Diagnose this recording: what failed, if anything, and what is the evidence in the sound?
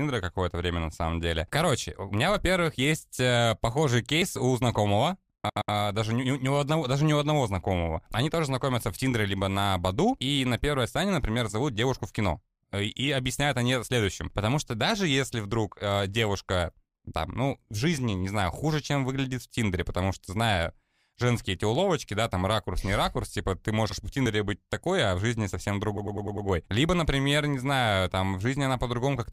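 Driver or buffer stage: jumps at 4.22 s and 24.26 s (just before "быть такой а в"), each skipping around 40 ms, likely a dropped buffer (overrun).

Codec or storage stage, repeated frames: stutters at 5.49 s after "у знакомого" (120 ms, twice more), 23.89 s (60 ms, once), and 25.97 s after "а в жизни совсем" (100 ms, five times).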